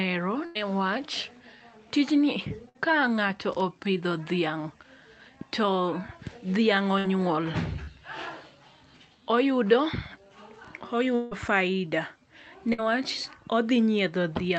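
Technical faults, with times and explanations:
0.45–0.57 s, 2.69–2.77 s, 6.99–7.06 s and 12.73–12.80 s, burst of packet loss: each time the receiver stretched the last sound into a fading buzz or hiss, about 100 ms of audio missing in the first gap and about 60 ms in the others. On a spectrogram the harmonics run flat and dim, then the pattern jumps ahead.
7.84–7.89 s, short concealed packet loss: about 20 ms never arrived, and the receiver covered the hole with a synthesized continuation blended back into real audio. It comes across as a brief smear. The waveform shows a slightly too-regular stretch, and the spectrogram a faint horizontal smudge.
11.15–11.33 s, long network dropout: for about 0.16 s the sound turns into a held, decaying tone that fades without falling fully silent before the audio resumes further on. The likely cause is packets lost over the network, concealed by extrapolation. 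The spectrogram shows frozen, thinning bands and the waveform a shrinking envelope.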